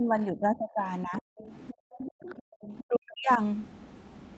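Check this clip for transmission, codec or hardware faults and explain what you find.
Three kinds of echo-canceller fault affect the speech, all in the first three and a half seconds. The 8 kHz upper limit comes from the Opus call path and is not among them.

Speech suppressed in double talk, 0 to 1.27 s and 2.86 to 3.4 s: the talker's speech dips. It drops by around 25 dB in the first stretch and around 40 dB in the second. The likely cause is the canceller mistaking overlapping far-end speech for echo and attenuating both.

Other side's voice leaking through, 1.16 to 2.83 s: a second voice sits faintly underneath, roughly 20 dB below the main speech. This is likely loudspeaker playback reaching the microphone and not fully removed by the echo canceller.

Background gated by the echo canceller, 1.73 to 2.58 s: the room tone sinks by about 40 dB in brief drops totalling around half a second, then returns. 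The canceller clamped the microphone hard while the loudspeaker was active.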